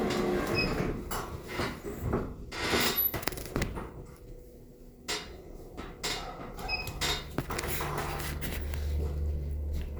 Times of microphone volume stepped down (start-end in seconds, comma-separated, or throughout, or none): none